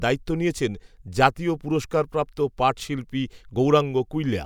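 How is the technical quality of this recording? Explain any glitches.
No technical faults are audible.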